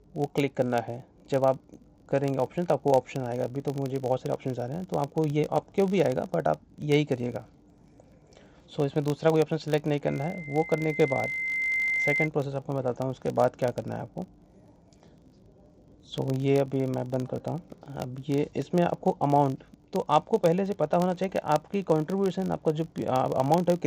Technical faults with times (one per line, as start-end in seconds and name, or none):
0.00-23.87 filter restarted on every block
10.07-12.29 loudspeaker feedback squeal